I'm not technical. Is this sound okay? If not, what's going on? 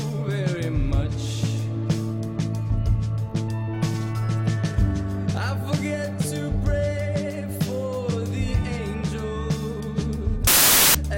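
No. From 10.47 to 10.95 seconds, loud hiss bursts in. The player is building samples from the wrong bytes, so the sound turns into noise.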